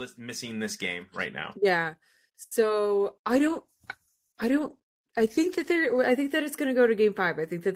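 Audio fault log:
2.43–2.53 s, short stall from a late packet. A packet arrived late and the jitter buffer ran dry. The receiver held the last sound for about 80 ms, then resumed where it stopped. Nothing is lost, but the sound drags with a faint buzz or dip.
2.61–2.64 s, short concealed packet loss. About 40 ms of audio never reached the decoder. Roughly 10 ms of it was patched by extending the preceding sound, then blended back. It comes across as a brief smear, and the timing jumps slightly early.
2.86–6.08 s, call bitrate drop. The bandwidth estimate fell and the encoder dropped from 32 to 13 kbps, staying at the low rate for about 3.1 s. Coarser coding and trimmed high frequencies make the speech rough, watery or muffled.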